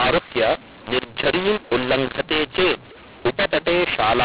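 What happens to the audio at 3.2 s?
At 3.2 s you're hearing the mu-law and A-law mix-up, which runs through the whole clip, not just that moment. The speech was coded as A-law but decoded as mu-law, so each 8-bit value maps to the wrong level. Some samples come out too loud, others too quiet, and the faintest ones get pushed well above silence. That makes the speech harsh and gritty and fills any gaps with hiss, all within the usual telephone band that stops at 4 kHz.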